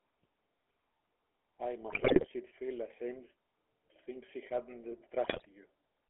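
From start to finish the speech carries the GSM full-rate codec's buzzy, gravelly roughness. The vocal tract is modelled and driven by coarse, regularly spaced pulses, and the sound sits in a narrow band from about 300 Hz to 3.4 kHz, which fits the old 13 kbps GSM full-rate coder.

From 1.9 to 2.27 s, just before "she'd feel ashamed to", GSM bit errors break through as squawks and gargling. Flipped bits corrupted the filter, pitch or gain values, so frames came out with bent spectra or jumps in level. The same thing hits again from 5.24 to 5.46 s, which points to a weak link flipping a few percent of its bits.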